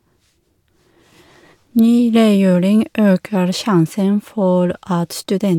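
No technical faults can be heard in this speech recording.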